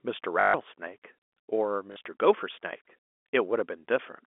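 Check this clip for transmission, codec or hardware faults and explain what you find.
Two short dropouts are patched by packet loss with last packet repeated. The first runs from 0.40 to 0.54 s, the second from 1.92 to 1.96 s. The receiver replays its last packet across each gap. The rough 50 Hz buzz fits 20 ms packets. Both stutter robotically over the narrow G.711 telephone band.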